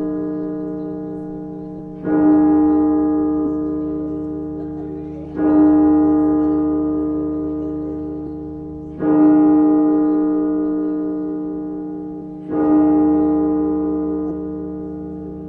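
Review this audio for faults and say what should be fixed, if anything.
There are compressed frames skipped at 1.78, 3.45, 5.24, 8.26, 12.21 and 14.3 s. Each time the audio jumps ahead, dropping from about 70 ms to about 400 ms, with the longest gaps near the end. The frames just weren't decoded, whether missing or rejected as corrupt. To fix it, re-export or re-transfer from a clean source and verify the file's integrity before it goes out.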